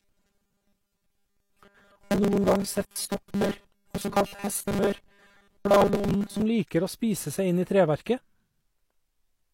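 From about 0.01 to 6.42 s the speech carries robotic sound from repeated short buffers, a rigid, metallic 200 Hz buzz, likely from 5 ms blocks being replayed while new audio is skipped. A spectrogram shows evenly spaced 200 Hz harmonic lines, and the waveform shows repeated 5 ms cycles over roughly 70% of the span.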